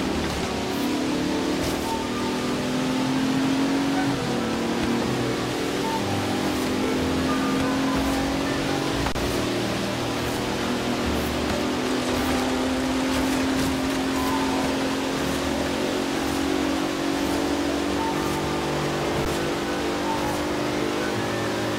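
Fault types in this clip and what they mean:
Underrun with held sample: the output buffer ran dry, so the converter just sat on its last value until fresh data showed up, leaving a flat stretch where the sound stops. Here it happens at 9.12 s for about 30 ms and again at 19.25 s for about 10 ms. Since essentially nothing was lost, playback picks up right where it paused, so the sound briefly stalls and resumes.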